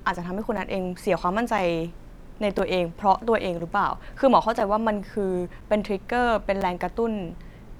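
At 0.57, 1.58, 2.59, 3.59, 4.60, 5.61 and 6.61 s the speech drops out for about 7 ms each time, a textbook gap between chunks. The audio is being delivered in 1 s pieces, leaving a sliver of silence at the join. Nothing is missing, but every second you get a tiny hole in the speech.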